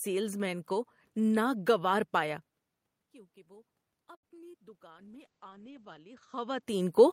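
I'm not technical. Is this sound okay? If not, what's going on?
No. From 3.11 s to the end, automatic gain rising: the system found the input too quiet and slowly turned itself up, so the voice and background grow louder together. At 4.15 to 4.25 s there is a short stall from a late packet: a piece of the call arrived late, so the last sound is held for about 0.08 s. Two short concealed packet losses follow, at 4.29 to 4.32 s and 4.52 to 4.55 s: tiny pieces never arrived and were patched over, leaving brief smears or wobbles. From 4.91 to 6.69 s a call bitrate drop forced much coarser coding, so the voice turns rough and muffled, with the crisp top end cut off, before clearing. The background room noise and the changes in loudness around 2.5 s and 6 s, when the talker moved, are not system faults.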